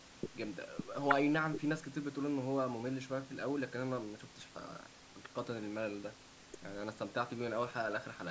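Nothing goes wrong anywhere in this bit of speech; it has simply come through a call's microphone processing, which trims the deepest bass and leaves nothing above 8 kHz, exactly as that path should.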